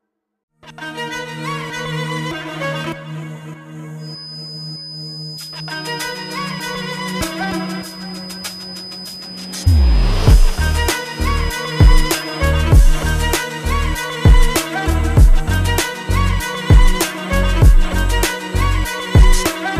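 From 3.96 s to 12.52 s a thin, steady whistle at 5 kHz sits well beneath the sound, roughly 20 dB down, slowly swelling and fading in level. This is a feedback whistle, likely from a loudspeaker-to-microphone loop held just short of instability, so one frequency keeps ringing without building up. Unlike a runaway howl, it never swells toward overload. Unlike fixed electrical interference, its level is not perfectly constant.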